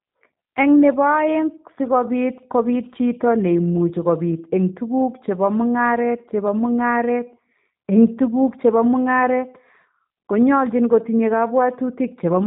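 G.729 codec damage runs throughout: nothing passes above 3.8 kHz, and the speech, rebuilt from a filter and sparse pulses, sounds rough and synthetic, consistent with an 8 kbit/s VoIP link.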